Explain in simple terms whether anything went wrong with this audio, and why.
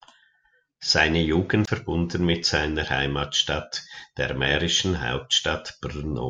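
CD skip at about 1.65 to 1.67 s, just before "mit seiner": the laser jumped to another turn of the disc, so playback briefly muted, then resumed elsewhere.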